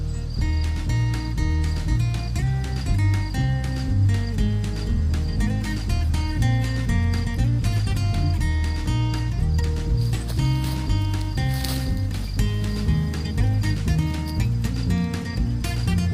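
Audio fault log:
Nothing stood out as a fault on listening.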